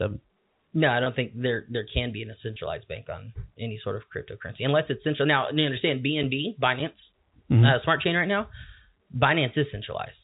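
At 1.04 to 1.06 s and again at 2.54 to 2.56 s, the speech briefly holds and turns slightly buzzy, as if one instant were sustained a touch too long. This is packet loss with pitch repetition. About 20 ms of audio went missing each time, which fits a single lost packet. The receiver filled each gap by repeating the last pitch period, and normal speech resumed almost at once. The G.711 telephone coding keeps everything below 4 kHz.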